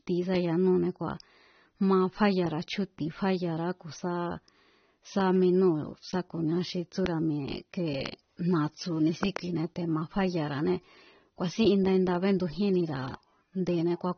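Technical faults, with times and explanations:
Throughout: AAC compression. Nothing is heard above 6.3 kHz, so the speech sounds dull. Codec damage is plainly audible. The likely cause is AAC-LC encoding at a low bitrate, around 24 kbps, which drops the high band and coarsely quantises what remains.
7.06 to 7.08 s, 8.06 to 8.08 s, and 9.23 to 9.39 s: loud pop. Single pops land at 7.06 and 8.06 s, and a double pop at 9.23 to 9.39 s. Each peaks about 15 dB above the speech, which carries on underneath. A likely cause is a sudden voltage step or pulse, from a plug, switch, static or driver glitch.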